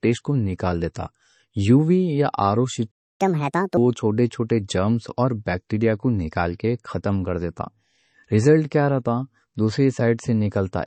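Low-bitrate audio saved at a high bitrate affects the whole speech clip. The swirly, smeared artefacts of heavy compression remain. This likely comes from a 32 kbit/s MP3 re-encoded at around 256 kbit/s. The larger file cannot restore what the first encoding discarded.

A playback stall begins at 2.91 s, right after "یا آر او", and the output falls silent until 3.21 s, a gap of about 0.28 s. The player likely ran out of buffered data or was blocked, so the sound halts mid-flow before resuming.

Catch-up at higher speed runs from 3.21 s to 3.77 s, ending just before "وہ چھوٹے چھوٹے جرنز". The player resamples its backlog at 1.5 times normal speed to recover the lost time, so the audio rushes and rises roughly seven semitones in pitch before dropping back to normal.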